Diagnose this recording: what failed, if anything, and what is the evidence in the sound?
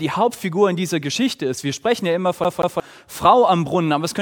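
CD stuck on one turn at 2.44 to 2.80 s: a playback fault where the laser jumps back, replaying a 180 ms slice twice with a brief mute at each jump.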